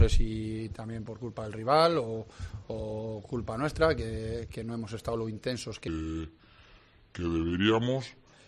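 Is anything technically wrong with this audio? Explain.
Yes. A wrong sample rate affects 5.88 to 8.33 s. The samples are clocked out more slowly than they were captured, with no conversion. The sound runs at about 0.73 times normal speed and drops roughly 5.5 semitones, which fits 44.1 kHz material played at 32 kHz.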